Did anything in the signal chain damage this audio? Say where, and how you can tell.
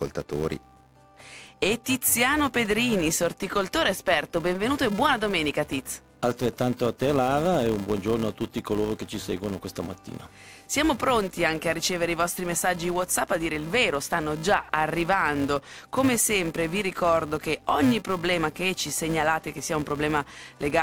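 Yes. A filter restarted on every block, in block-based processing, adds a steady 375 Hz buzz throughout that follows the level, consistent with 128-sample blocks each starting from cleared state.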